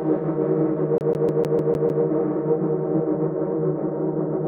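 At 0.98 s the audio gets caught in a CD stuck on one turn: the laser keeps jumping back a track, so the same 152 ms slice repeats seven times with a brief mute at each jump. It's that quick, even skipping-disc stutter, lasting until about 2.04 s.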